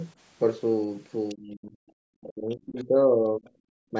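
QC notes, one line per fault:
1.29–1.35 s, 1.88–1.92 s, 2.79–2.84 s: other side's voice leaking through. Short, faint second voice about 25, 40 and 30 dB under the talker, likely loudspeaker echo left in by the echo canceller.
1.34–1.73 s, 2.21–3.46 s, 3.91–3.95 s: speech suppressed in double talk. The talker's level sinks by up to about 25 dB (about 15 dB in the last), likely as the canceller turns both voices down while the far side talks.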